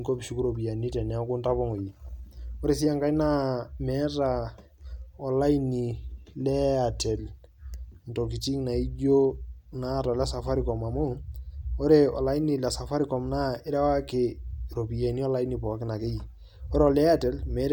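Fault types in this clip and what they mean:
No audible faults detected.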